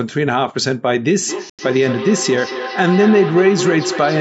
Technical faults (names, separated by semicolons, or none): feedback howl; Bluetooth stall